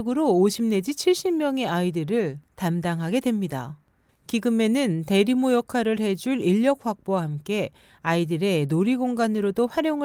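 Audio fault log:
No technical faults can be heard anywhere in the speech recording, and the signal stays steady and intact throughout.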